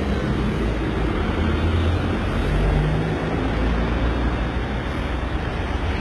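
From start to finish, the treble sounds synthetic and gritty, with nothing above 11.8 kHz. The cause is likely heavy HE-AAC compression, which fits a bitrate near 16 kbps. Copied-up lower bands replace the real highs, so harmonics misalign and bright detail turns metallic.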